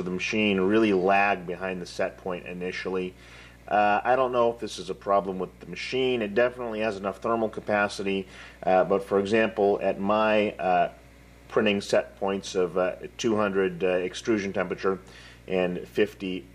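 A video or display source is coupling into the audio path across the whole clip, producing video or display buzz, about 25 dB below the wanted sound. Its fundamental sits at the 59.94 Hz field rate, with a coarse hash of harmonics above it and a thin whine at the 15.7 kHz line rate. The result is a constant rasping hum under the audio plus a high tone.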